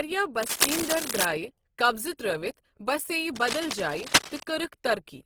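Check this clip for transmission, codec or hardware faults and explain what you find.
Three faults are present: codec damage throughout, two bursts of scratching, and one pre-echo.

Across the whole speech clip there is plainly audible damage of the kind likely caused by Opus compression in its music (CELT) mode. The band stays full, reaching 20.5 kHz, but voiced sounds come out rough and grainy, which fits a rate near 16 kbps. Unlike MP3, it swirls less, because empty bands are filled rather than left as holes.

From 0.43 to 1.25 s, just before "قبضہٕ تر٘ٲوِتھ", and again from 3.35 to 4.43 s, dense uneven rustling sits over the speech at roughly the same loudness. This is cable scratch noise, likely from a worn contact whose resistance jumps as it moves. Its irregular bursts set it apart from steady hiss or regular crackle.

At 2.17 s a short hiss of about 18 ms runs just ahead of a sharp attack, softening its onset. 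This is pre-echo: the codec spread noise sized for the loud attack across its whole block, including the quiet moment before it. Because it precedes the attack rather than following it, it is distinct from an ordinary echo.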